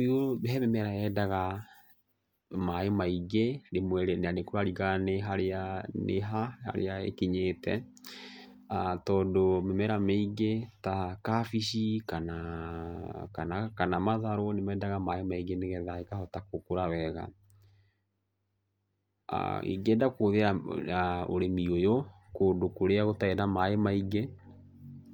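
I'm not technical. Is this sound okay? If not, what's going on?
Yes, nothing in this recording stood out as a problem when I listened to it.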